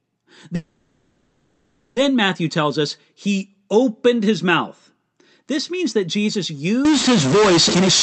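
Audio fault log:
0.55–1.98 s, call audio freeze: the sound stops moving forward and is carried on as a fading buzz or hiss for about 1.41 s, with nothing dropped and no true silence. The likely cause is packets held up in transit so the jitter buffer ran dry and the receiver extended the last sound; when delivery resumed the audio picked up where it left off, so the clip now runs about 1.41 s behind.
6.85–8.02 s, stuck bit: from here to the end the sound turns noisy and distorted, and quiet stretches fill with noise instead of going still. This likely comes from one data bit held at a fixed value by a faulty line or converter, which shifts roughly half the sample values by that bit's weight in a waveform-dependent pattern and flips with the sign of small values, so even near-silent moments are disturbed.
7.69–7.89 s, jitter buffer speed-up: the audio hurries, running at about 183% of normal speed while keeping its pitch, with roughly 150 ms taken out over the 0.2 s span. 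The receiver had built up more buffered audio than it aims for and trimmed the backlog by repeatedly cutting short pieces one or a few pitch periods long, which compresses time without shifting pitch. The Opus call path carrying this sound limits it to about 8 kHz bandwidth.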